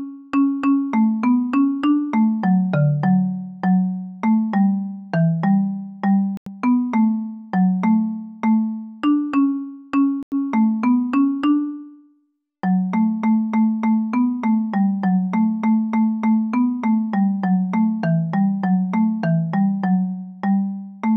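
At 6.37 s and again at 10.23 s the sound cuts out for about 0.1 s, likely a Bluetooth dropout where late packets to the headphones were discarded. After each gap, playback resumes further along as though it had continued, rather than picking up where it stopped.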